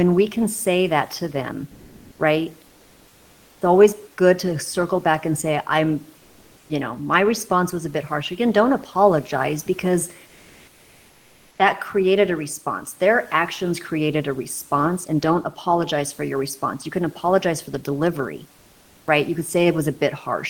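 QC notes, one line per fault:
1.71–2.19 s, 6.19–6.67 s (between "back and say I'm" and "you know my response"), 10.27–11.59 s (after "don't apologize because", before "that created a response"): comfort noise in place of the background. The room's ambience turns flat and textureless, shifting about 8 dB in level in the first gap and barely changing in the others. This is likely Opus discontinuous transmission stopping during pauses and the receiver filling them with synthetic noise.
19.05 s, after "apologize for the delivery": onset clipped by the voice detector. The next sound bursts in abruptly, with its first 20 ms or so missing. The sender's voice detector likely reacted late, so that opening slice was never transmitted and was replaced by filler noise.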